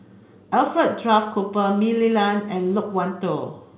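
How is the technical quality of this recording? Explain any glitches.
No glitches are audible here.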